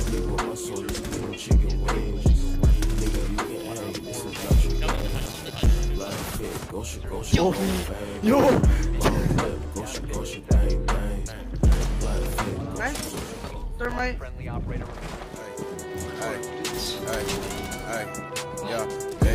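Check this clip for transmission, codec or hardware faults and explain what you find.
There's processor overload crackle, twice: from 4.90 to 5.67 s and 13.85 to 13.99 s. The processor kept missing its deadlines on short buffers, around 5 ms each, leaving tiny silent holes. Around thirty of them give gritty tearing in the first burst, and only a handful in the brief second one.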